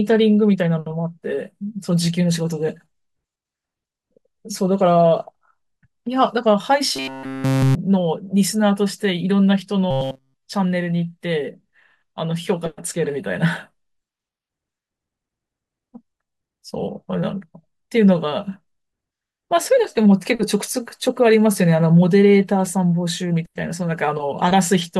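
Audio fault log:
6.96–7.75 s and 9.91–10.46 s: robotic sound from repeated short buffers. Speech becomes a rigid metallic buzz at 133 Hz. Likely a 7.5 ms buffer looped throughout.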